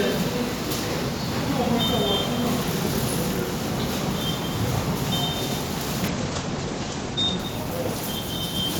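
From 6.08 s, a call bitrate drop starves the encoder; the top end shrinks to 8 kHz and the sound goes rough and muffled.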